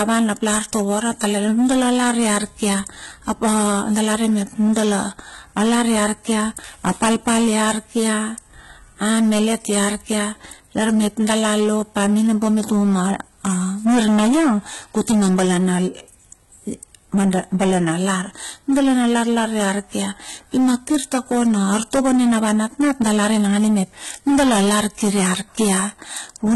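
From start to finish the speech is driven about 15 dB past full scale, so hard clipping flattens the peaks of roughly one sample in seven. Unlike soft saturation's rounded warmth, the squared-off tops produce a harsh, buzzing fuzz on every loud syllable.

Also present throughout: the treble stops dead at 11.8 kHz, and what sits below it sounds synthetic. S sounds come out gritty and lispy, with a metallic sheen. The likely cause is heavy HE-AAC compression, at a rate that fits roughly 16 kbps. Plain low-pass filtering would dull the top end, but here replicated bands keep it bright and wrong.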